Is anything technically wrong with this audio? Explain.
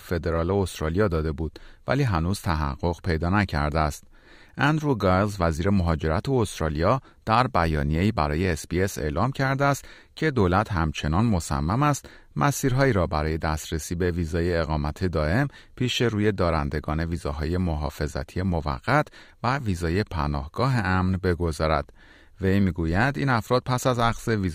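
Yes. From 0.50 s to 24.35 s the speech carries clock slip clicks: faint, evenly spaced ticks roughly every 0.7 s, about thirty in all, most noticeable on loud sustained sounds and absent in pauses. The likely cause is two devices running on independent, unsynchronised clocks. The drift, which fits an error of around 30 ppm, builds to a whole sample and then a single sample is dropped or repeated, leaving a small waveform discontinuity each time.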